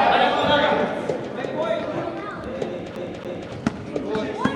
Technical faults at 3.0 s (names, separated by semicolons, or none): CD stuck on one turn